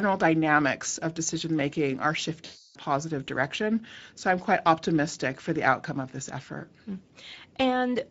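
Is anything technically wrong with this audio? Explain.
Yes, there are two faults. Throughout, the speech sounds hoarse and noisy, the plainly audible damage of the Speex codec, which fits a rate near 16.8 kbps and leaves the excitation starved of bits. From 2.45 to 2.78 s, just after "of decision making are", the voice is stretched out and fades. This is VoIP packet loss concealed by the speech codec: roughly 300 ms of audio went missing, and the decoder stretched its last pitch and filter with falling gain.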